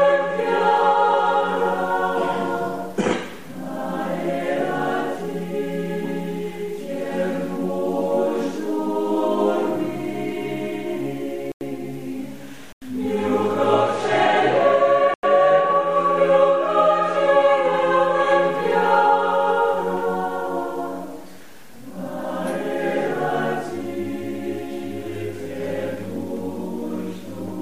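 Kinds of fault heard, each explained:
Block of digital silence: the audio drops to silence for about 93 ms at 11.52, 12.73 and 15.14 s, each time abruptly. The identical lengths point to output buffers not being filled in time, which fits a 4096-sample buffer. Unlike a faded dropout or concealed packet loss, nothing is smoothed or filled in. Each hole is true silence with hard edges.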